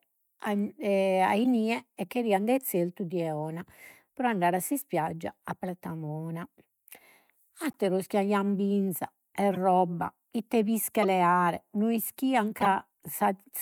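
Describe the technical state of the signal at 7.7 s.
At 7.71 to 7.76 s the speech carries a corrupt frame decoded fault lasting about 48 ms. A couple of consecutive compressed frames arrived with flipped bits, and the decoder reconstructed them anyway, applying wrong gain values and misreading spectral codes. Energy lands at frequencies where it does not belong, producing a brief, low-level chirp-like blip with a peak of roughly -45 dBFS, confined to the span of the damaged frames.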